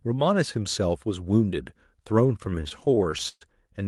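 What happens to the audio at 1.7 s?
Nothing goes wrong at 1.7 s: the speech carries on intact through the call path, with the band limit you'd expect from a WebRTC connection, where content above about 12 kHz is cut away.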